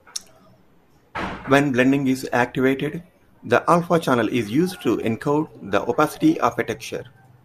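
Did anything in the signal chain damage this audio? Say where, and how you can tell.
No, nothing along the chain has left a mark on this speech recording. There are no events in it that would point to damage at any stage from capture through to playback.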